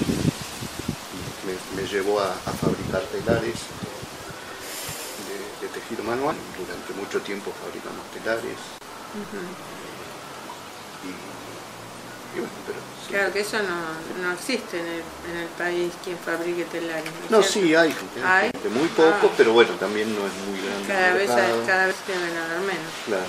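At 8.78 s the sound drops out for about 27 ms, then picks up exactly where it left off. The same thing happens again at 18.51 s, this time for 31 ms. Both are gaps at a join of encoded pieces, about ten seconds apart. Each piece was encoded on its own and butted up against the next untrimmed, so the encoder's start-up delay and last-frame padding ended up sitting in the middle of continuous sound. The edges of each hole are smeared.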